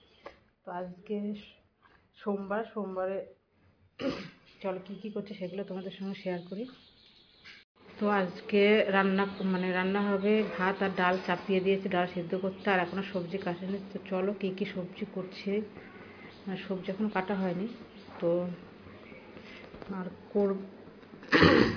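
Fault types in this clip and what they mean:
Nothing in this clip stands out as a technical fault; the sound comes across steady and undisturbed all the way through.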